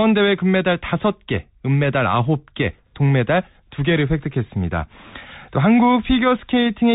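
Speech passed through a Bluetooth CVSD headset codec throughout, consistent with 64 kbps one-bit delta coding, so nothing above 3.8 kHz survives, s sounds turn scratchy, and granular hiss sits underneath.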